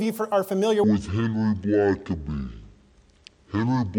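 From 0.84 s to the end, a section at the wrong speed: the audio plays at 0.524 times its proper rate, likely because it was rendered against the wrong clock. Pitch falls by roughly ten semitones at that instant and everything turns deep and sluggish. On a spectrogram, harmonics and formant bands drop sharply lower and every feature is drawn out to nearly twice its width; the waveform's envelope looks stretched and slow.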